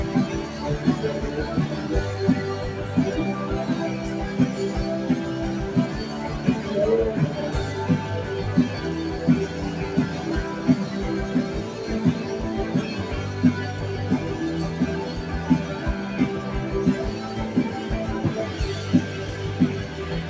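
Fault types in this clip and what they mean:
Noise suppressor applied to music or sounds, throughout: a suppressor tuned for speech stays engaged, treating sustained tones, ambience and decay as unwanted noise. Transients pass, but held material and tails are pulled down, with gain swinging by roughly 5 dB, so the sound pumps and thins as the level dips after each onset. The call path's band limit, with nothing above 8 kHz, fits the G.722 codec at 64 kbps.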